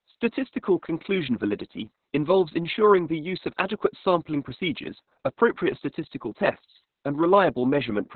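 From start to finish the speech carries heavy Opus voice compression, running in its narrowband SILK mode. Nothing survives above about 4.3 kHz, so it's muffled and boxy, and the coarse excitation coding leaves it hoarse and faintly robotic, which fits a bitrate down around 6 kbps.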